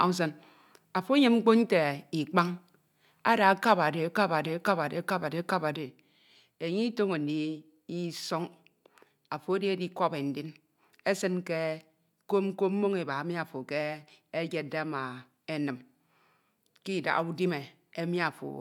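At 5.76 s a sudden gain jump drops the speech and background noise together by about 5 dB, instantly rather than as a fade, likely an unramped digital gain change.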